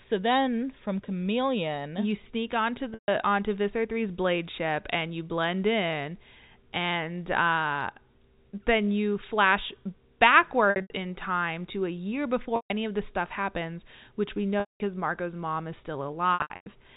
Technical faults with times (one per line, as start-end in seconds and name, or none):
2.94-3.08 packet loss with pitch repetition
10.70-10.90 packet loss with pitch repetition
12.56-12.70 packet loss with pitch repetition
14.60-14.80 packet loss with pitch repetition
16.34-16.66 packet loss with pitch repetition